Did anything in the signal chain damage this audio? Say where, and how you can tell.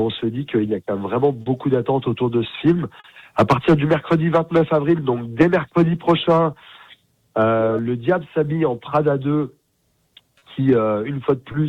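Yes. The timing never quite settles: small hiccups and an uneven pace recur at irregular intervals throughout. This is clock drift between sender and receiver at the network stage. The sending clock runs about 3 percent slow, so the receiver's jitter buffer keeps draining and needs correction.

Four brief holds, at 1.42–1.48 s, 3.00–3.06 s, 10.39–10.44 s and 11.52–11.56 s, each freeze the sound for 20 to 40 ms before it resumes where it left off. Each is a short stall from a late packet: the buffer ran empty and the receiver stretched the last sound.

From 4.53 to 9.72 s the audio runs at 97 percent speed with tiny stretches scattered unevenly. These are repeated timing corrections: the receiver repeats short slices to match the slower sender, adding roughly 150 ms overall, every edit in the same direction.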